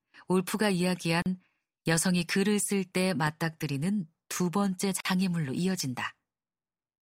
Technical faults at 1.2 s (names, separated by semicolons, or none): gap at a join of encoded pieces